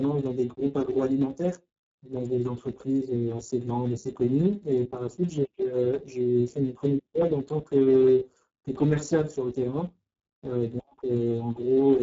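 Speex codec damage runs throughout the speech, from start to finish. This CELP coder rebuilds the voice from a vocal-tract model and a coded excitation signal, and here the excitation is starved of bits, which points to a very low setting of around 6 kbps. The result is heavy: speech sounds hoarse, noisy and partly robotic. Nothing is present above 7.6 kHz.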